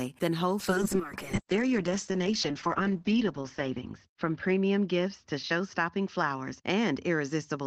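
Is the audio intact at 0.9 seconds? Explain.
No. At 0.9 seconds the speech is inside a call bitrate drop that begins at 0.62 s and lasts to the end of the clip. The encoder was forced onto a much smaller bit budget. The sound fits a fall from about 32 kbps to roughly 7 kbps, with the lowest rate held for about 2.6 s. Coding turns coarse and rough. The top end is cut from 20 kHz to 8 kHz, so the speech sounds muffled.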